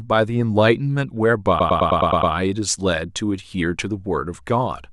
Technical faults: repeated frames

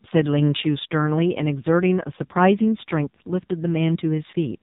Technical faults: AMR narrowband mobile codec

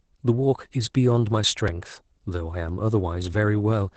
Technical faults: Opus voice compression

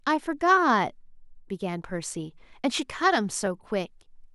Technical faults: clock drift buffer slips

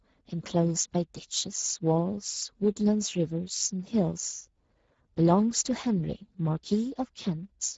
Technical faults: Speex codec

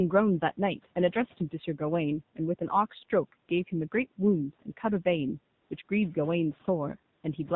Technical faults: AMR narrowband mobile codec; AMR comfort noise

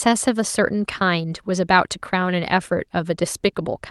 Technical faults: none

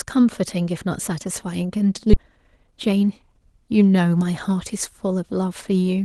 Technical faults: skip ahead; jitter buffer speed-up

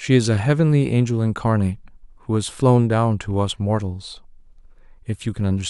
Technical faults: none

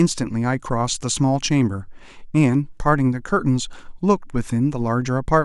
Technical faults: none

